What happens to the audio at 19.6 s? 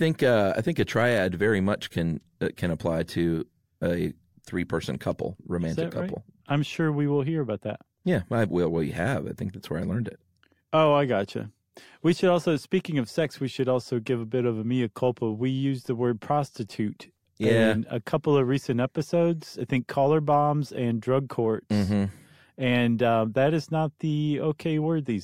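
Nothing goes wrong at 19.6 s; the speech carries on intact there, with no dropout, click or distortion.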